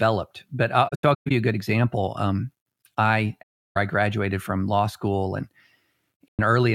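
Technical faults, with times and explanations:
0.88–1.31 s: AAC frame loss with muting. Several scattered dropouts, the longest about 150 ms, fade softly to silence before "you a good example", showing as blank spectrogram gaps with tapered waveform edges.
3.42–3.77 s: AAC frame loss with muting. About 340 ms of zeroed spectrum before "I graduated from law". Overlapping windows fade it out and in, leaving a clean vertical gap on the spectrogram.
6.28–6.39 s: AAC frame loss with muting. A 107 ms soft-edged hole where the decoder muted lost frames, seen as a short empty band with ramped waveform edges.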